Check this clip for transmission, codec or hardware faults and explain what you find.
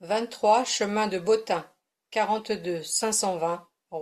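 No transmission, codec or hardware faults.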